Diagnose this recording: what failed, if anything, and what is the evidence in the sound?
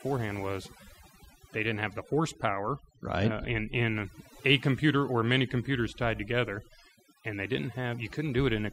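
The background drops and breaks up into twinkling specks throughout. This is overdone noise removal at the processing stage: the suppressor cuts individual frequency bands that sit close to its noise estimate, taking the quieter parts of the speech with them.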